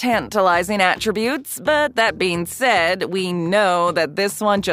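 No faults can be heard anywhere in the clip.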